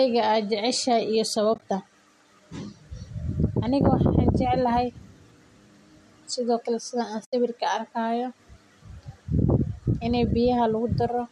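At 1.54 s, just after "jeceshahay iyo", the speech breaks up in an AAC frame loss with muting. About 50 ms of audio is lost, scattered over 1.54 to 1.62 s in short gaps of around 20 ms at most. A second, unbroken hole of 80 ms follows at 7.25 to 7.33 s. The decoder zeroes each missing frame, and the overlapping windows fade the sound out and back in. That leaves a soft-edged silence, which sets it apart from hard dropouts or glitchy repeats. The short gaps fit the roughly 10 ms frames of the likely low-delay AAC-ELD coding, whose light roughness sits in the background.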